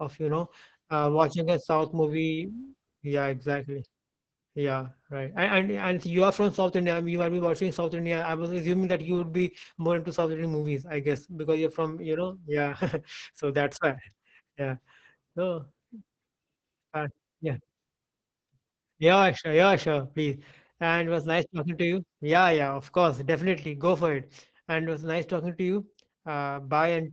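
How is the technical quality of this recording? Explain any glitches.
The technical quality is poor: heavy Opus voice compression degrades the entire recording, from start to finish.

Throughout, the speech sounds muffled, hoarse and faintly robotic. The linear-prediction coder rebuilds each short frame from a filter and coarsely quantised excitation, which fits a bitrate near 10 kbps. A spectrogram shows content ending sharply at 8 kHz, with smeared, grainy harmonics.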